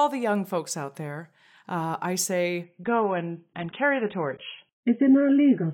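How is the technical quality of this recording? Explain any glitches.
The speech has one clear fault. From 2.64 s, right after "out there uh I", to the end, the adaptive stream drops to a lower bitrate when the connection slows. The switch is abrupt with no gap. Treble vanishes above 3.8 kHz, and the spectrogram shows a flat ceiling, which points to a fall from roughly 96 to 19 kbit/s AAC.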